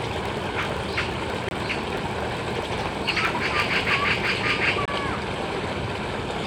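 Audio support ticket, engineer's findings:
Filter restarted on every block. 0.00 to 4.53 s. Steady 43.1 Hz buzz riding under the sound, louder where the sound is louder. Filter state reset each block, so each block opens with a small transient. Rate fits a 1024-sample block. Stops after 4.53 s.

Dropout at 1.49 to 1.52 s. Hole, sound resumes further on as if it had kept playing. Likely a Bluetooth dropout: packets late to headphones and discarded. Roughly 23 ms of sound missing, which fits one lost frame.

Dropout at 4.86 to 4.89 s. Same signature. Silence, then playback picks up ahead. Same Bluetooth link suspected. About 23 ms of sound gone, consistent with one dropped frame.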